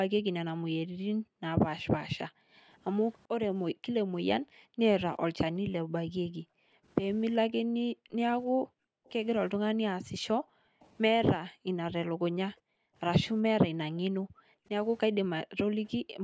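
The echo canceller clamped down on the microphone while the far-end loudspeaker was active, gating the background from 0.1 to 2.68 s, 3.72 to 4.81 s, 5.81 to 9.05 s, 10.02 to 12.95 s and 13.92 to 16.24 s. Within each span the room sound dips by up to about 40 dB for roughly 0.7 to 2 s in total, then returns as the canceller releases.

A faint, brief repeat of the speech appears at 9.05 and 10.81 s, each lasting about 60 ms and arriving about 0.39 s late, far below the main voice. This is likely echo leak, with the canceller letting a scrap of loudspeaker pickup through.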